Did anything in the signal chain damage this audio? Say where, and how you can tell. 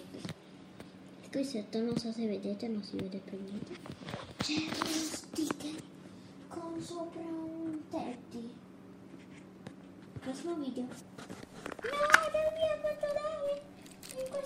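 Yes. From 11.43 s to 14.46 s a filter restarted on every block, likely in block-based processing. A 188 Hz buzz that tracks the signal level fits a 256-sample buffer. The spectrogram shows a comb of 188 Hz harmonics, and the waveform shows a small transient at each block start.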